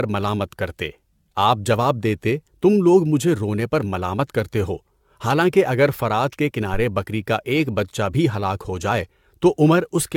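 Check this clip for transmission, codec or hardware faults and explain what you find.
One fault runs through the whole clip: generation loss. The speech sounds swirly, hollow and smeared, with blurred consonant attacks. The likely cause is several rounds of AAC-LC re-encoding, consistent with 96 kbit/s passes. Each pass re-quantises on a shifted frame grid, so noise accumulates and spectral holes compound. A spectrogram shows nothing above 17 kHz and patchy gaps between harmonics, and transients in the waveform look softened rather than sharp.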